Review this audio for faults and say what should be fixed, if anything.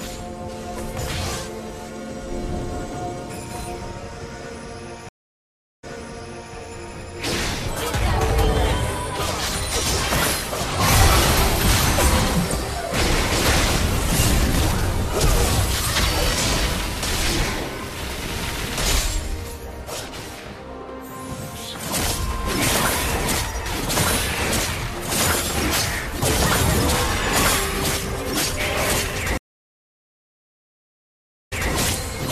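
Stream reconnect at 5.09–6.55 s (about 0.74 s silence) and 29.38–31.73 s (about 2.1 s silence). The link dropped, and a fresh decoder restarted mid-stream. Unlike a plain dropout, the sound resumes earlier, repeating about 0.72 s and 0.21 s. Larger client buffering and seamless resume-from-offset would prevent it.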